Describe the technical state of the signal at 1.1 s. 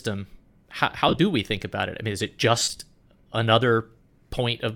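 Lost LE Audio frames, 1.08 to 1.19 s: the LC3 decoder refills gaps with sign-scrambled copies of the last spectrum, smearing the sound into noise.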